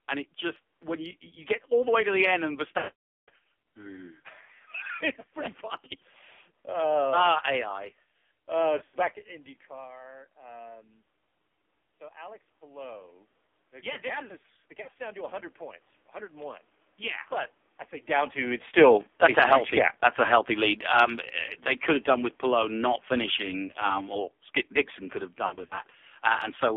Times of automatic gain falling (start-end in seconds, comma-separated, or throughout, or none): 18.67-23.56